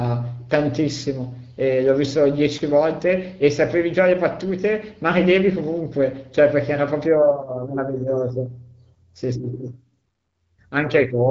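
No technical faults occur in this speech, which comes over the AMR wideband (HD Voice) codec at 12.65 kbit/s with nothing above about 7.5 kHz.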